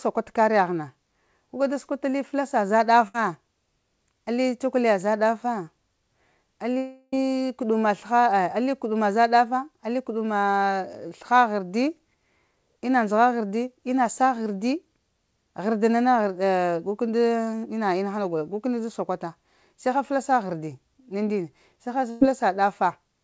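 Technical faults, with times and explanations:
3.08–3.15 s, burst of packet loss: the sound briefly smears into a held buzz or fading hiss as the receiver stretches the last audio over about 60 ms of missing packets, then jumps ahead.
6.78–7.13 s, long network dropout: a fading buzz or hiss fills about 350 ms without reaching silence, then the sound resumes further on, likely because audio stopped arriving over the network.
22.10–22.22 s, burst of packet loss: about 100 ms goes missing, covered by a decaying continuation of the preceding sound before playback skips forward past the lost part.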